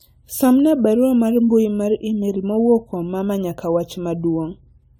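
The speech has generation loss from start to finish. It sounds swirly, smeared and hollow, worse than a single lossy encode at a decent rate would leave it. Consonant attacks are blurred. Nothing is present above 19.3 kHz. The likely cause is repeated decoding and re-encoding with a lossy codec, roughly seven passes, in a way that fits AAC-LC at 96 kbit/s. Each pass quantised on a new frame grid, so noise and spectral holes piled up.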